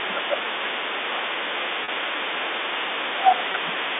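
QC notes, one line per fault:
0.00–2.41 s and 3.17–3.80 s, speech suppressed in double talk: the talker dips by about 15 dB, likely the echo canceller ducking everything while both sides talk.
Throughout, other side's voice leaking through: a second voice sits about 15 dB under the talker, likely loudspeaker echo the canceller didn't fully remove.
1.84–1.88 s and 3.52–3.54 s, packet loss with pitch repetition: brief held, buzzy moments as the last pitch period repeats over 40 ms and 20 ms gaps, which fits two lost 20 ms packets and then one.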